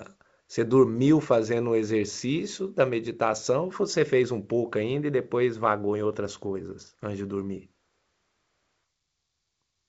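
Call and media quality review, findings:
No faults found; speech carries the G.722 wideband telephone coding character, band-limited near 7 kHz with at most a faint upper-band hiss, which fits the 64 kbit/s mode.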